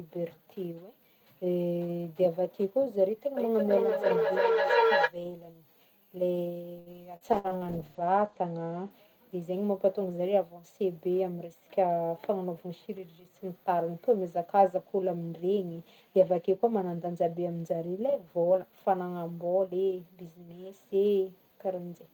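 Speech, and it's got a cluster of network trouble. From 3.37 to 5.15 s there's feedback echo between two devices: each bit of speech comes back around every 300 ms, thinner and ringing, peaking about 3 dB above the speech itself. At 6.79 to 6.89 s a short stall from a late packet holds the sound for 70 ms, with nothing actually lost. Right after, at 7.16 to 7.24 s, a short concealed packet loss smears over about 60 ms of missing audio. Then a call bitrate drop from 7.35 to 8.97 s takes the encoder from 32 kbps down to 12 kbps, so the bandwidth falls from 20 kHz to 8 kHz and it sounds muffled and rough, bottoming out for about 1.03 s. Inside that, a burst of packet loss at 7.39 to 7.60 s loses 60 ms of audio, filling 54 ms with a fading continuation of the last sound before the speech picks up further on. Finally, a jitter buffer speed-up from 11.70 to 12.37 s runs the speech at 109% speed, same pitch, trimming about 70 ms, so it sounds a little hurried.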